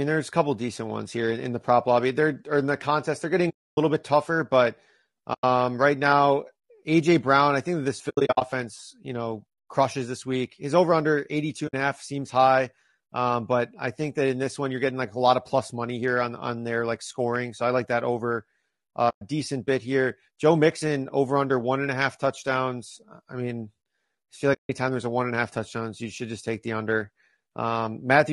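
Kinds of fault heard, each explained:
Low-delay AAC compression: The speech sounds rough and grainy throughout, with a hiss filling the spaces between voice harmonics and an upper band that sounds thin and synthetic. This is most likely AAC-ELD, the low-delay codec used in video calls, at a bitrate around 32 kbps. Its very short frames cannot separate pitch harmonics cleanly. Unlike a plain low-pass or band-limited line, the damage is grainy texture rather than simple dullness.
AAC frame loss with muting: Sound fades to silence and back in at 3.49 s (280 ms), 5.33 s (100 ms, after "bit tougher but"), 8.09 s, 11.67 s (60 ms), 19.09 s (120 ms) and 24.53 s (160 ms, before "there's a one and"). At 8.09 s, after "I think this", the gaps are scattered over 320 ms in short runs. The edges are soft, unlike a hard dropout.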